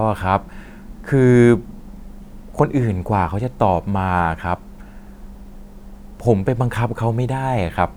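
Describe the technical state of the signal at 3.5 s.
At 3.5 s the speech signal is intact, with no audible technical fault at that moment.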